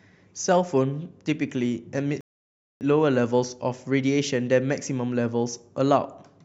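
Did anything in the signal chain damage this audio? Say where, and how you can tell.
Yes: a rebuffering stall at playback, 2.21 to 2.81 s. The speech drops to silence, then resumes exactly where it stopped, so the player starved for data and paused, adding about 0.6 s.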